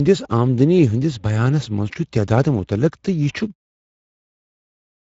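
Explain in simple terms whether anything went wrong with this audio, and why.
The speech was squeezed through the Speex codec, an older voice-chat compressor, and the damage is plainly audible from start to finish. Speex rebuilds speech from a rough model with too few details to work with, so the voice comes out noisy and hoarse. Nothing at all remains above about 7.7 kHz. The quick fade-out near 3.5 s is ordinary editing.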